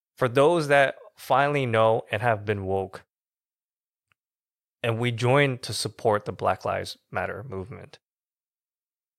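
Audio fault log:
No fault is heard in this speech audio.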